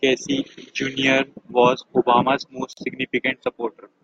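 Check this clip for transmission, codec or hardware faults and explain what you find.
One fault is present: a gap at a join of encoded pieces, from 2.73 to 2.77 s. The speech appears to have been encoded in separate chunks, about 4 s each, and spliced without trimming the silent encoder delay and the padding on the final frame. Both survive at the seam, so the speech cuts out for about 41 ms, with softened edges, and then resumes exactly where it left off.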